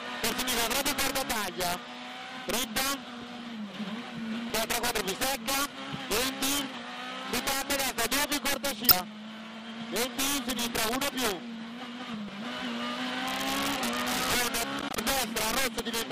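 Throughout the clip, a gain stage drives the signal about 6 dB past the top of its integer range, and instead of being limited, the excess wraps around to the opposite sign. This integer overflow hits only the loudest peaks, a few percent of samples, but each one flips across the full range, so loud moments carry violent, sharp cracks, far harsher than ordinary clipping.

At 4.47 s, 8.88 s and 12.25 s, damaged data in the compressed stream makes the decoder misread a stretch of frames, lose sync and hunt for the next valid frame header. Each event lasts about 30 to 35 ms and is heard as a short squawk or blip where the sound briefly turns to garbage before the decoder locks on again.

From 14.80 to 14.97 s, processor overload crackle appears as the processor repeatedly fails to deliver audio buffers on time. Each missed deadline drops a short slice of silence with hard edges into the output, and the spacing of the gaps fits a buffer of around 10 ms, with several missed in a row. 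Over those 0.17 s the stream of tiny dropouts is heard as a gritty tearing burst that stops once the load eases.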